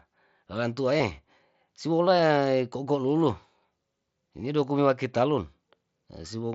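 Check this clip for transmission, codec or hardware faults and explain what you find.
There is one kind of fault, concealed Bluetooth headset packet loss, heard twice in the speech. From 0.98 to 1.00 s, about 22 ms of buzzy, steady tone replaces the audio, with a slight warble as it resumes; at 2.19 s a brief 7.5 ms gap is nearly seamless. Packets from headset to phone went missing, and the receiver filled each hole by repeating the best-matching stretch of the preceding waveform. The longer patch sounds like about three consecutive lost packets. The mSBC wideband link carrying the speech adds only light graininess.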